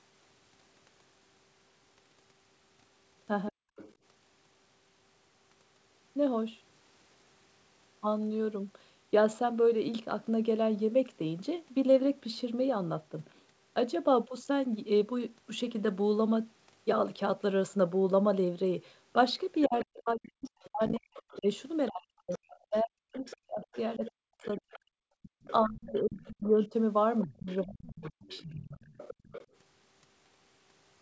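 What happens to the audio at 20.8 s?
The talker's speech is being pushed down hard there: between 19.67 and 28.83 s it dips and cuts out in pieces, by as much as roughly 40 dB, for about five seconds in total. This is speech suppressed in double talk, likely from the echo canceller turning everything down while both sides spoke at once. From 20.44 to 21.38 s, the other side's voice is also leaking through faintly, around 20 dB below the talker, most likely loudspeaker echo that the canceller failed to remove.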